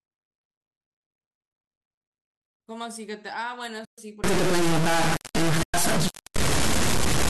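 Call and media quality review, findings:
AAC frame loss with muting, 3.85 to 3.98 s (130 ms) and 5.63 to 5.74 s (110 ms). Soft-edged silent holes, fading out and back in. Fits roughly a dozen short low-delay frames zeroed by the decoder, with the overlapping windows smoothing the edges. Unlike a hard dropout or buffer underrun, there is no step discontinuity.

Stuck bit, 4.24 s to end of clip. Distortion riding on the signal, and pauses fill with hiss instead of going quiet. Likely cause is a sample bit stuck high or low in a converter or data line, corrupting about half the values in a waveform-dependent pattern. Unlike clipping, it distorts at low level too. Unlike codec grain from the light AAC-ELD coding at 64 kbps, it persists in silence.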